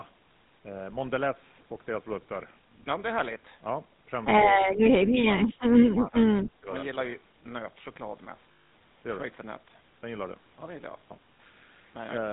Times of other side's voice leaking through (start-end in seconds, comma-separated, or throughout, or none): none